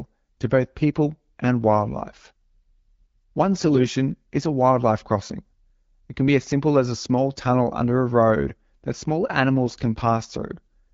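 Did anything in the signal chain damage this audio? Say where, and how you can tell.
Yes. The damage is on the network side: AMR bit errors hit the wideband speech stream from 3.61 to 3.88 s. Over a weak radio link, a few percent of the less protected bits in each frame arrived flipped, while the checksum on the critical bits still passed, so the decoder used the frames rather than concealing them. The roughly 0.27 s span fits about thirteen 20 ms frames. Because the pulse positions and the finer gain, pitch and spectral parameters were corrupted, the speech keeps roughly its pitch and loudness there but turns hoarse, scratchy and gargly. That is different from the light, even colouring of the 12.65 kbit/s AMR-WB coding heard across the rest of the clip.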